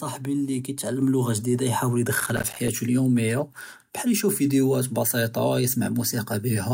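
At 1.02 s the microphone volume steps up. The call software raised the input level by about 4 dB at once. Speech and background both jump louder together.

From 2.20 to 2.68 s there is processor overload crackle. An overloaded processor missed around twenty short buffers, each roughly 5 ms. Each miss leaves a hard-edged silent gap, heard as gritty tearing.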